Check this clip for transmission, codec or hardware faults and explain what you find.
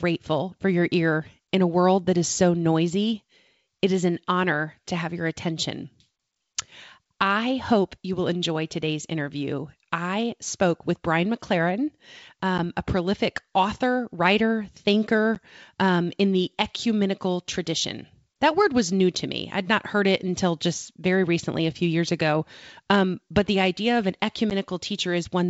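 Three brief dropouts break up the speech, all from packet loss on an ADPCM call. The G.722 wideband coding at 64 kbit/s carrying the call shows faint or no damage of its own.

At 12.58 s, just before "a prolific author writer", at 15.35 s, just before "um in the ecumenical", and at 24.50 to 24.54 s, after "the idea of an", a hard-edged hole of about 10 ms appears, followed by slightly distorted speech before the sound settles. Each gap fits a single lost packet filled with silence. That loss leaves the decoder's adaptive predictor and step size out of step with the sender's, so the speech comes back distorted until they realign.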